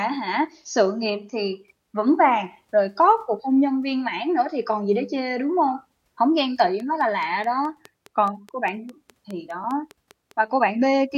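From 6.39 s to 10.32 s, a train of clicks runs over the speech. About twenty near-identical pulses arrive at a steady 4.84 per second, peaking a few dB above the audio. They tick through pauses too. Interference from nearby equipment is the likely source.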